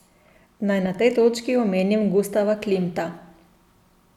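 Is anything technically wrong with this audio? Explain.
No, nothing stood out as technically wrong on listening to this speech recording.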